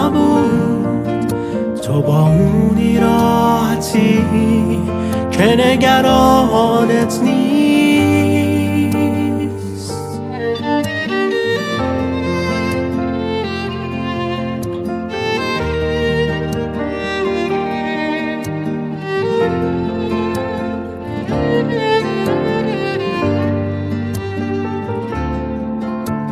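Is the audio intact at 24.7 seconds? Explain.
Yes, at 24.7 seconds the audio plays through cleanly, with no dropout, click, distortion or other fault audible at that point.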